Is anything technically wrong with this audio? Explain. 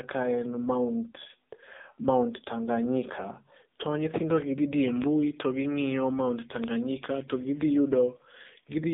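Yes. Throughout the speech, it has passed through the AMR narrowband mobile codec. It rebuilds the voice from a vocal-tract model and sparse pulses at a rate that fits the low 6.7 kbps mode. Nothing survives above 3.8 kHz, the band runs from 200 Hz to 3.7 kHz, and the heavy coding leaves the voice buzzy and synthetic.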